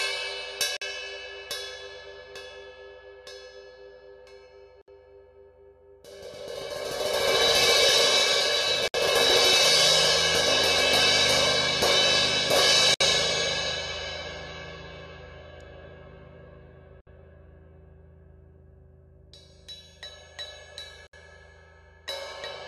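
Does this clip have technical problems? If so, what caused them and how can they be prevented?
Yes. There is a gap at a join of encoded pieces, recurring every 4.0 s: silences open at 0.77 s (47 ms), then at 4.82, 8.88, 12.94, 17.01 and 21.07 s (each 63.5 ms). Each piece was encoded separately, and the encoder's start-up delay and final-frame padding stayed in when the pieces were joined. The sound therefore drops out briefly, then resumes where it stopped. On a waveform these appear as short flat-line slots with smeared edges. On a spectrogram they are narrow blank vertical stripes across all frequencies. To prevent this, trim each piece's encoder delay and padding, or use gapless playback metadata, before joining.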